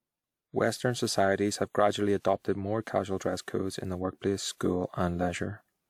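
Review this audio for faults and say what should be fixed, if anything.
Throughout, the speech sounds swirly, hollow and smeared, with blurred attacks. This is generation loss, likely from about four WMA passes near 128 kbit/s. On a spectrogram it shows flickering holes below a 20.1 kHz cutoff. Keep a lossless master and encode to WMA only once, at the final step.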